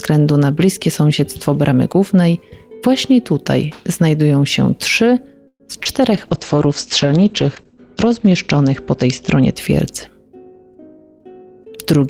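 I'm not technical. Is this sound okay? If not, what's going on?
No, there are four separate problems.

Call audio freeze, 5.47 to 5.62 s: the sound briefly hangs, the last bit of it stretched into a fading buzz that drops to near silence for a moment before the audio picks up again exactly where it left off. Likely cause: pieces of the call were held up on the way, and the receiver ran out of audio to play. It filled about 125 ms with that stretched sound instead. Nothing was lost, but the audio now runs that much later.

Short concealed packet loss, 5.83 to 5.87 s: a tiny smear or wobble. About 20 ms of the real audio never arrived in time. The receiver patched the hole by carrying the previous sound forward and then blending back into the real thing, which made this stretch slightly longer than it should be.

Call bitrate drop, 6.13 to 9.65 s: the sound turns rough and muffled, as if heard through a cheap phone, and loses its crispness above about 8 kHz. 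It is at its worst for roughly two seconds before it recovers. The connection seemed to get worse, so the sender was told to squeeze the audio into far less data, and detail was thrown away.

Jitter buffer speed-up, 10.45 to 11.73 s: the audio sounds slightly hurried, about 10% faster, with no change in pitch. The receiver had more audio waiting than it wanted. To catch up, it quietly cut out many tiny slivers, around 150 ms in total, so the sound rushes along.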